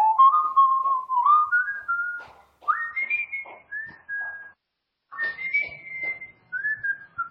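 At 2.91 s the sound drops abruptly in quality and stays degraded to the end. This is an adaptive stream at a lower bitrate: the player switched to a cheaper encoding, apparently because the connection slowed. The switch is seamless, with no gap, but nothing survives above 5.5 kHz. The audio turns dull and watery, with swirling codec artefacts, which fits a fall from roughly 128 kbit/s MP3 to about 16 kbit/s. That grainy artefacting is what separates it from a simple low-pass filter, which would muffle the sound cleanly.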